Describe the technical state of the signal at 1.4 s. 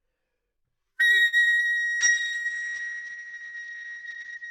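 At 1.4 s the signal is in a burst of repeated packet loss, giving a robotic sound. It runs from 1.27 to 1.61 s. Five gaps fall in that third of a second, the longest about 51 ms. Each hole is patched by stretching the last good audio forward, and the next hole arrives soon after. About half the span is patched sound, roughly 171 ms, and about 120 ms is simply missing. The result is choppy and broken up.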